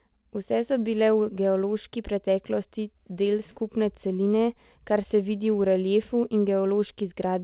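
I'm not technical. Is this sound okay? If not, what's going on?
Yes, nothing has gone wrong in this speech clip; it simply has the narrow, phone-like sound of an ordinary call line that stops at 4 kHz, which is normal for a standard telephone codec.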